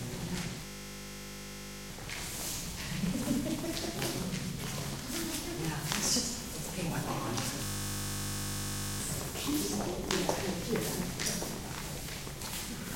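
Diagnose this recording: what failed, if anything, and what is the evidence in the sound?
A system hang loop at the driver or buffer stage. From 0.66 to 1.9 s and again from 7.64 to 9.0 s, one 20 ms slice repeats exactly, producing a steady 50 Hz buzz. This fits a short ring buffer that the hardware kept replaying while the driver froze. Unlike a dropout, the sound never falls silent.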